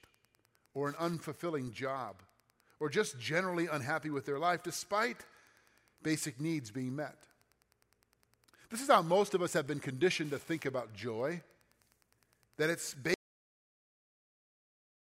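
A Wi-Fi radio near the audio circuit is being picked up and rectified, its beacon arriving every 102.4 ms. Throughout the speech this Wi-Fi interference is heard as a faint, steady ticking about ten times a second, sitting well below the voice.

At 13.14 s the audio input is lost, likely through a disconnected device or failed link, while recording carries on writing silence. This audio dropout to silence cuts the speech off mid-flow, and complete silence with no room tone lasts to the end.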